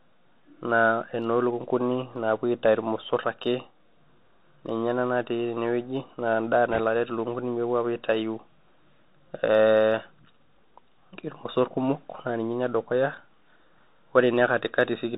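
From start to finish the speech carries the sound of a Bluetooth CVSD headset codec, and the damage is easy to hear. The band is capped at about 4 kHz, so everything sounds phone-narrow, which fits a 64 kbps CVSD link. CVSD only sends one bit per sample saying up or down, with an adapting step size, so loud bright moments outrun the step and smear. The s sounds come out scratchy, with a fine granular hiss sitting underneath.

Right after "enewueji na endaa", from 6.71 to 6.81 s, there's a short burst of bit errors on the Bluetooth voice link, at a rate of around a couple of percent. Each flipped bit only nudges the signal one step, an error that grows with the speech level, and the error fades out on its own rather than sticking. So instead of loud clicks you get a brief rushing, crackly wash of noise laid over the speech for about a tenth of a second.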